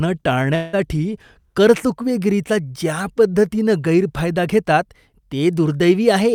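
From 0.55 to 0.75 s the speech gives way to a buzzy or hissy continuation of the preceding sound that fades over roughly 170 ms without reaching silence, then resumes with about 180 ms of material missing. This is a long network dropout, likely a stall in packet arrival that the receiver papered over by extending the last audio.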